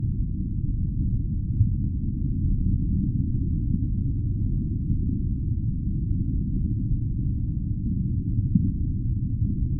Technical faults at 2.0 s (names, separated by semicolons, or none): none